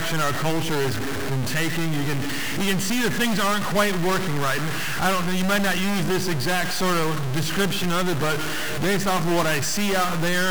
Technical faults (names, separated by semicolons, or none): stuck bit